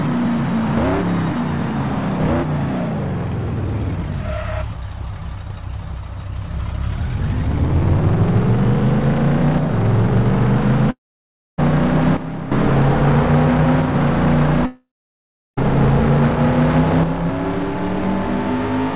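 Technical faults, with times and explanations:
10.91–11.60 s and 14.66–15.59 s, long network dropout: packets likely stopped arriving for about 0.68 s and then 0.92 s. The receiver stretches the last sound into a fading buzz, then near-silence, and audio resumes with that stretch simply gone.
12.17–12.52 s and 17.03 s to the end, sudden gain jump: digital gain was likely switched without a ramp, dropping by about 11 dB and then about 6 dB. Sound and background noise fall together at once, the first drop lifting again after about 0.35 s.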